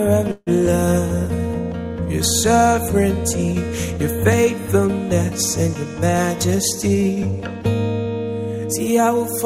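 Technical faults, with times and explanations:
0.31–0.49 s, call audio freeze: the sound stalls into a fading buzz for about 150 ms, ending in roughly 20 ms of silence, likely because packets were held up and the jitter buffer ran empty. Playback then resumes where it stopped, nothing lost but 152 ms later.
5.85–7.64 s, jitter buffer speed-up: the audio runs at 107% speed with unchanged pitch, sounding slightly hurried. The receiver was trimming excess buffered delay by cutting many tiny pitch-period slices in succession, removing about 150 ms in total.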